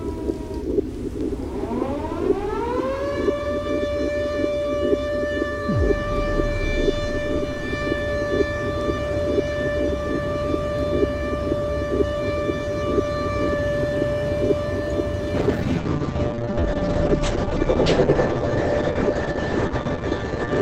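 At 15.38 s there's a call bitrate drop that lasts right through to the end, about 5.2 seconds. The call's bandwidth estimate fell, so the encoder was squeezed onto far fewer bits. It codes everything much more coarsely and gives up the top end. The audio goes muffled, rough and watery, with the high frequencies cut off at 8 kHz instead of reaching 20 kHz. That fits a fall from around 128 kbps to roughly 9 kbps.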